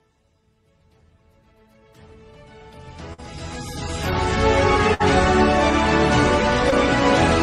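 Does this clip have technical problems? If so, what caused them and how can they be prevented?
Yes. A burst of packet loss occurs at 3.13 to 3.20 s and 4.94 to 5.02 s. The receiver extended the last sound for 46 and 61 ms as a fading tail, then skipped 40 and 60 ms. Larger jitter buffers and redundancy such as FEC help prevent this.

A short concealed packet loss at 6.70 to 6.73 s leaves a brief smear, where 14 ms of synthesized fill stands in for 20 ms that never arrived. A more stable network path and in-band FEC reduce these.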